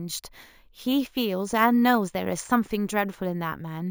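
Imaging from sample-and-hold upsampling runs through the whole speech clip. The sound points to a 16 kHz source raised to 48 kHz by repeating each sample, with no smoothing filter after it. That leaves mirror copies of the spectrum, the first folded into the band from 8 kHz to 16 kHz. They sit about 20 dB below the speech. The result is a bright, metallic fizz that rises and falls with the voice. Its lowest copy moves against the pitch.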